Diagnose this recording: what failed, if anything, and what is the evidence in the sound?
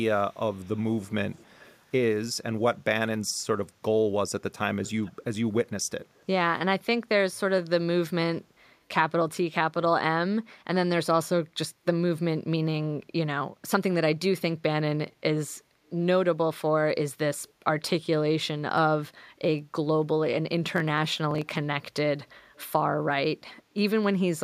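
Echo leak at 0.31–0.80, 1.01–1.14, 1.33–1.77, 4.84–5.24, 6.06–6.24, 17.44–17.52 and 22.54–22.68 s: faint copies of the speech trail the original by about 309 ms. They sit roughly 25 to 40 dB below the speech. This is a call-processing fault, likely at a far end using a loudspeaker, where the echo canceller let part of the microphone's pickup of the playback through and sent it back.

Processor overload crackle from 20.76 to 21.57 s: a burst of gritty tearing rides on the speech and stops when the load passes. The stage is the driver or buffer. The texture fits very short buffers, well under a millisecond, with around twenty deadlines missed across that stretch. Each late buffer was skipped rather than filled, so the audio jumps forward with a hard edge at each miss. In quick succession, those edges form continuous crackle.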